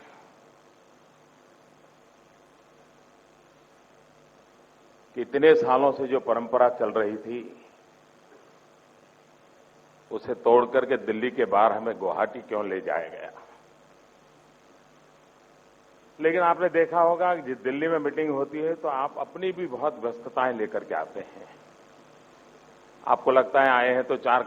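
No technical fault can be heard anywhere in the recording; the signal stays steady and intact throughout.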